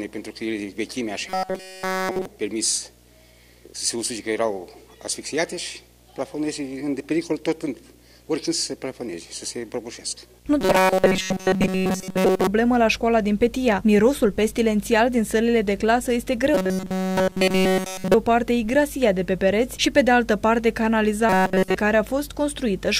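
A video or display buzz runs through the whole clip: a 60 Hz field-rate hum with a fizzy hash above it, sitting roughly 35 dB below the programme. It comes from picture circuitry or a video cable coupling into the audio path.

From 1.28 to 2.26 s, 10.61 to 12.47 s, 16.54 to 18.14 s, and 21.29 to 21.75 s, the sound turns into a rigid, metallic buzz pitched at 188 Hz that only loosely follows the underlying audio. This robotic sound is likely from repeated short buffers: the last 5.3 ms or so is looped while the incoming audio is almost entirely skipped.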